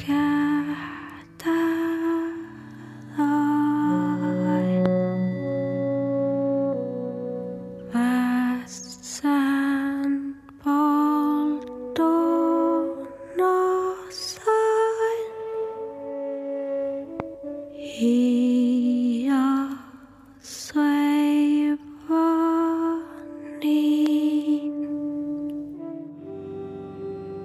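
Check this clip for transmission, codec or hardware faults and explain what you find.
There are three loud pops, at 4.86, 17.20 and 24.06 s. Each is a single sharp thump standing well above the sound, the last a little softer. The likely cause is a brief voltage pulse, such as a plug, switch or static discharge, added to the signal. Unlike a dropout, the sound carries on underneath without a gap.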